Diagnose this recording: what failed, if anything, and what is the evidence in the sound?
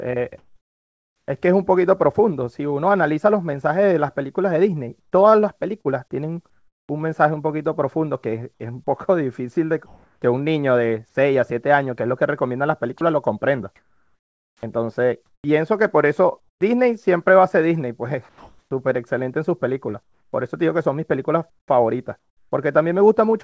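Comfort noise in place of the background appears at 0.38 to 1.28 s, 5.00 to 6.89 s, 8.54 to 10.22 s, 18.29 to 18.71 s and 20.03 to 22.52 s. The pauses turn into steady, featureless hiss, about 3 dB quieter at 0.38 s and 18.29 s, where the background sits about 55 and 51 dB below the loud parts. This is call processing, likely discontinuous transmission. Unlike a dropout, the pauses never go silent.

Short concealed packet loss occurs at 5.81 to 5.92 s, inside a comfort-noise stretch. About 38 ms was filled by extending the preceding sound and then blended back. This network fault sounds like a brief smear or wobble, not a clean gap or a sustained synthetic bed.

Sound dropped by the voice detector hits at 8.54 to 8.60 s. Some 60 ms is replaced, and about 30 ms of real sound disappears into steady noise. The sender likely mistook the sound for background. It differs from packet loss because nothing is extrapolated. 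The sound simply gives way to noise.

Sound chopped by the voice detector runs from 12.98 to 16.61 s. Across this span, about 1.3 s in total flips repeatedly to comfort noise. This is likely detector switching, not a single drop. The wideband call path shows nothing above 8 kHz.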